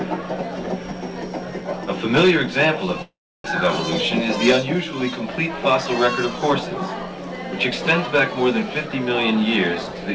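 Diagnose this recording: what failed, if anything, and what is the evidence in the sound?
At the network stage, a long network dropout runs from 3.02 to 3.48 s, likely from lost packets. The last sound smears into a fading buzz, then about 320 ms of near-silence appears as blank spectrogram columns and a flat waveform. Audio resumes with 400 ms missing and timing shifted around 20 ms.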